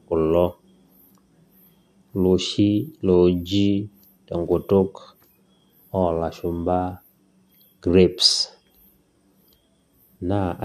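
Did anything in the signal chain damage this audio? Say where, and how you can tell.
No, nothing along the way seems to have damaged this speech recording, and there's no point in it where a stage of the chain gives itself away.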